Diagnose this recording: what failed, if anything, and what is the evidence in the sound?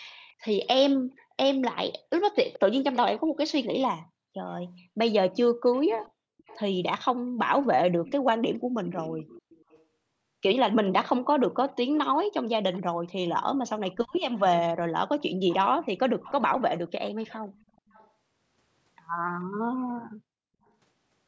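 A faint delayed copy of the speech, trailing by 428 ms and roughly 20 to 30 dB below it, appears at 0.24–0.33, 2.34–3.65, 5.72–6.6, 8.05–9.84, 11.95–13.12 and 14.11–18.09 s. This echo leak sits in call processing, likely residual loudspeaker pickup the echo canceller failed to subtract.

The room background falls by about 40 dB at 6.21–6.37 s and again at 19.46–19.82 s, each dip recovering within a fraction of a second. This is background gated by the echo canceller: its suppressor clamped the microphone while it judged the loudspeaker active.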